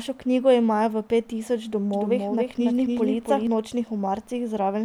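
A second, late path likely fed the same signal back into this speech recording, producing a doubled audio track from 1.93 s to 3.47 s, starting right after "imajo v pet tisoč". The extra copy trails the original by roughly 0.3 s and sits around 5 dB lower. It is full-band and dry, with no decay or room colour, and the copy cuts in and out abruptly at both edges.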